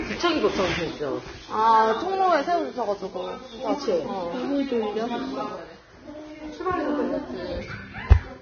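Across the whole clip the audio is band-limited, with nothing above 6.5 kHz, and the remaining upper range sounds hissy and grainy. Tones have a rough edge and attacks are smeared. This is likely heavy Vorbis compression. At this level the encoder lowers its cut-off and quantises the treble so coarsely that fine detail is replaced by noise of similar energy. The degree of damage fits a bitrate of roughly 18 kbps.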